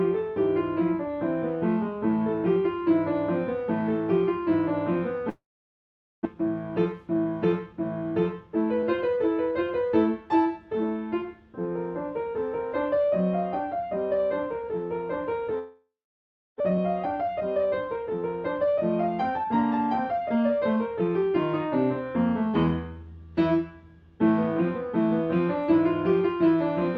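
The audio cuts out twice, at 5.29 to 6.27 s and at 15.59 to 16.62 s. Each time the last sound trails on as a fading buzz or hiss, then gives way to near silence for about 0.82 s and 0.67 s. When the audio resumes, roughly 0.6 s of material is simply gone. This is likely a long network dropout: no packets reached the receiver, so it stretched out what it had and then fell silent until the stream returned. Right after each gap the audio sounds rushed at unchanged pitch: about 10% fast from 6.34 to 9.52 s and from 16.70 to 18.18 s, and later about 15% fast from 20.05 to 21.09 s. This is jitter buffer speed-up. Delayed packets arrived in a bunch, and the receiver trimmed many short pitch-period slices to shed the excess delay, around 300 ms in the first stretch and about 150 ms in each of the others.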